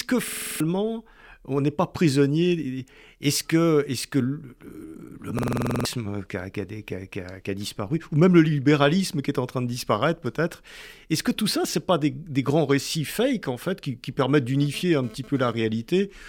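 At 0.28 to 0.60 s and again at 5.39 to 5.85 s, a system hang loop repeats one 46 ms slice of speech, about seven and then ten times, giving a machine-gun stutter at 21.5 Hz. The slice length fits a 2048-sample ring buffer replayed while the system froze, and roughly 0.3 s and 0.5 s of audio go missing. A waveform shows identical blocks tiled end to end, and a spectrogram shows vertical seams every 46 ms.

From 14.62 to 15.53 s, GSM phone buzz adds a hard, raspy 217 Hz drone at about 21 dB below the speech, breaking up as the phone sends data in bursts. On a spectrogram it appears as evenly spaced harmonic lines at multiples of 217 Hz reaching well into the kHz range. These lines are interrupted where the bursts pause.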